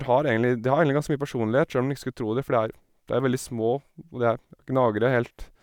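Speech recording; no technical faults detected.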